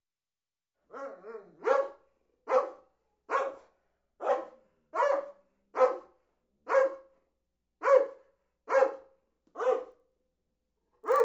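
From 9.88 s to the end, there's a resampler restarted on every block. The 16 kHz to 48 kHz conversion was run on each 40 ms chunk separately, so the converter never saw the real neighbouring samples at the edges and left a small error at every seam. You hear it as a steady tick at 25 Hz, quick enough to blur into a buzz, and it rides along only while there's signal underneath.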